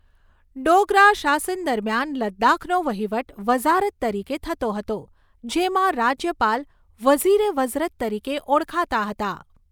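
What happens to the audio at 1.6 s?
Nothing goes wrong at 1.6 s; the speech there plays through intact, with no dropout, click, distortion or other fault at that moment.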